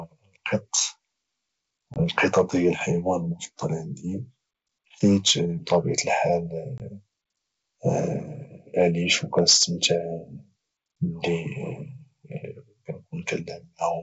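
At 1.94 to 2.01 s, and again at 6.78 to 6.80 s, packet loss on an ADPCM call cuts a 20 ms hole into the speech, which fits one lost packet each time. The waveform drops abruptly to flat silence, and the spectrogram shows a clean vertical gap. Because the decoder's predictor and step size lose track of the sender's, the speech resumes with brief distortion that settles within tens of milliseconds.

From 9.12 to 9.86 s the loudest syllables sound harsh and crackly, most likely from microphone overload, with peaks driven about 5 dB past the converter's limit. On the waveform a small share of the peaks have their tops flattened off. On the spectrogram those moments smear energy upward as broadband splatter.

Inside that stretch, at 9.53 s, the voice and the background both drop by about 2 dB in a single step. The likely cause is the microphone volume being stepped down by the call software reacting to the clipping. 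The waveform envelope shrinks abruptly at that point, and the spectrogram dims evenly across all frequencies. The G.722 wideband coding around these events sounds consistent with 64 kbit/s, with its faint upper-band hiss.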